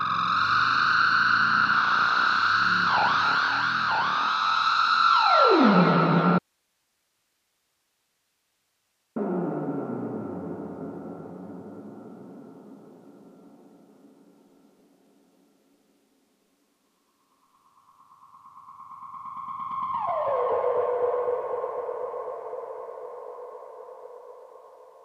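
At 6.39 s the audio drops out abruptly to a faint residue and stays that way until 9.16 s, a gap of about 2.8 s. The signal vanishes mid-flow with no fade, and what remains is plain hiss sitting roughly 50 dB below the normal level. The likely cause is the wanted source being cut while the downstream path stayed live, so only its noise floor carried through before the sound snapped back.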